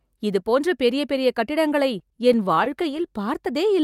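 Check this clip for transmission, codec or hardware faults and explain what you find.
There is one transmission fault, repeated stalls (stutter), from 1.99 to 3.11 s, right after "இதுபோன்ற பெரிய பெரிய கட்டிடங்களை". Late packets emptied the jitter buffer twelve times, and each brief hold of at most 19 ms stretched the last sound. Unlike dropouts, nothing is lost; the speech drags and hiccups.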